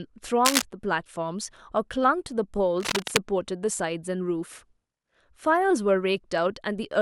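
At 0.45 to 0.62 s and again at 2.78 to 3.19 s, cable scratch noise crackles over the speech, the first burst about as loud as the voice, the second a little quieter. These dense, ragged bursts likely come from a worn cable or connector shifting contact resistance.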